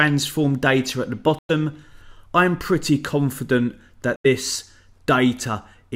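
At 1.39–1.51 s and 4.16–4.26 s, silences, likely a Bluetooth dropout: late packets were discarded, so sound resumes further on, not where it stopped.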